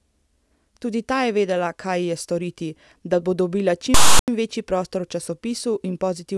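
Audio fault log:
3.94–4.28 s, file tags played as audio: a hard-edged burst breaks into the speech, a loud rasp pushed off to one side where tag text is read as sample values, plus a dead-silent stretch where zero padding decodes as silence.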